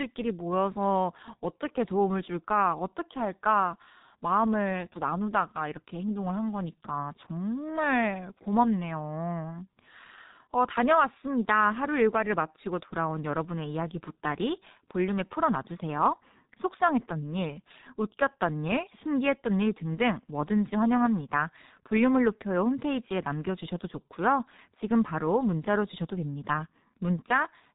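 From start to finish the speech carries the signature of the G.723.1 codec, and it's heavy damage. Nothing gets through above about 3.8 kHz, so everything sounds boxed-in and muffled. The codec works in coarse 30 ms frames and adapts its voice model sluggishly, which leaves the voice hoarse and smears consonants into each other. That degree of roughness fits a very low bitrate, around 6 kbit/s.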